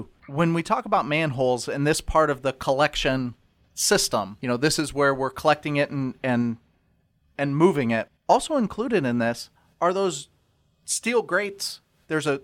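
No technical fault can be heard anywhere in the recording. There is nothing to place on the timeline.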